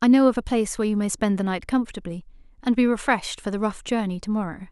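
No faults turn up anywhere in this speech recording, so there's nothing in its playback to point to or explain.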